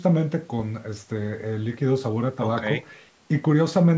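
Speech, with no technical faults to be heard.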